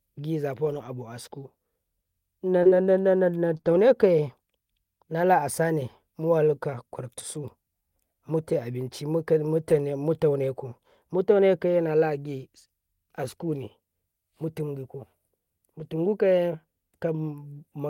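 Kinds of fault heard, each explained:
Scattered short gaps: Between 0.65 and 3.76 s, about three tiny holes, the longest near 30 ms, about 60 ms of audio missing in all, were papered over by extending the preceding sound. The speech stays clear but picks up brief ticks and smeared hiccups. On a spectrogram each patch shows as a thin smear of frozen, stretched harmonics. The waveform shows a short, unnaturally repetitive stretch with a slight discontinuity at its edges.
Lost packet rebuilt from error correction: At 9.70 s and 14.60 s a single 20 ms stretch, and from 15.80 to 15.86 s a 40 ms stretch, play from the low-bitrate backup copy carried in the following packet, Opus in-band forward error correction. So nothing drops out, but those moments sound briefly rougher and noisier. A spectrogram shows a narrow column with grainier texture. The waveform shows no gap, only a slightly coarser segment.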